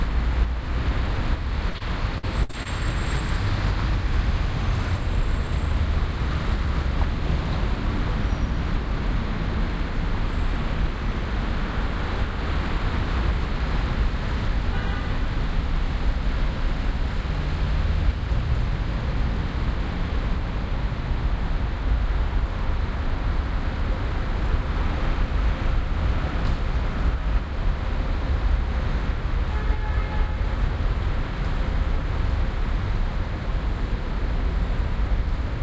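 At 1.70 to 1.76 s and 1.78 to 1.82 s, short concealed packet loss fills roughly 40 ms and 20 ms holes with continued sound, heard as brief smears, with smoothed, repetitive spectrogram patches. From 2.18 to 2.67 s, repeated packet loss (robotic sound) patches four gaps, the longest 60 ms, covering about 30 percent of the span. It sounds choppy, with stuttering, repeated waveform cycles, all below the 8 kHz ceiling.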